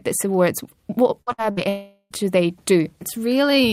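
A speech clip with three bursts of packet loss in quick succession, at 1.21–1.29 s, 1.32–1.47 s and 1.51–1.60 s. Each loses about 60 ms of audio. The receiver extends the last sound as a decaying buzz or hiss, which shows on a spectrogram as smeared, fading harmonics before the speech jumps ahead. A long network dropout follows from 1.69 to 2.14 s, where about 420 ms of audio is missing. It is almost entirely covered by a stretched, fading continuation and ends in a brief near-silent dip, so the waveform shows a shrinking envelope with no new detail. The cause is likely a stall in the network stream.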